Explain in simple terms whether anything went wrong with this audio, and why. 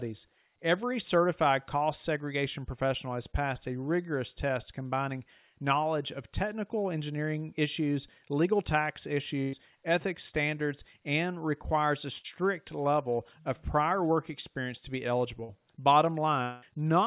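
Three short breaks and one longer one can be heard in this speech.

The short ones are a burst of packet loss. At 9.42 to 9.59 s, right after "engineering issues legal tax" and before "ethics standards and requires", a small run of the audio's data packets never arrived. The receiver covered the gap by stretching the last sound and fading it, then jumped ahead, so about a tenth of a second of speech is missing. The same happens at 12.18 to 12.26 s, after "standards and requires a" and before "level of prior work", and at 15.44 to 15.51 s, after "work experience to be". Those two gaps are shorter, about 60 and 40 ms.

The break at 16.43 to 16.64 s is longer. The sound is held and fades for about 0.2 s, and then the speech picks up further on with that stretch missing. This is likely a long network dropout, where nothing arrives for a while, rather than the loss of just a few packets. Its length is what sets it apart from the short bursts: the filler here lasts about twice as long as the longest one before it.

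The audio came through a phone-style call link, which is why everything above 4 kHz is absent.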